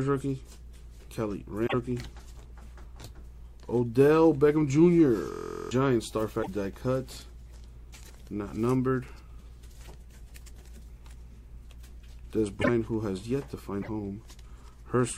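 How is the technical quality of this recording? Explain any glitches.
The recording has two kinds of glitch.

A broken MP3 bit reservoir is the likely cause of brief garbled bursts at 1.66–1.74 s, 6.42–6.48 s, 12.61–12.69 s and 13.81–13.89 s. Missing frames leave the next ones decoding wrong bytes, so the audio skips ahead with a short chirp or hole.

A system hang loop runs from 5.32 to 5.71 s. One 23.2 ms fragment repeats exactly, 17 times, which fits a 1024-sample buffer. It makes a steady 43.1 Hz buzz, not a one-off burst, and roughly 0.4 s of audio is lost.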